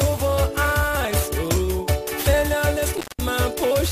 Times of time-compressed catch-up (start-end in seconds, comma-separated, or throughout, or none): none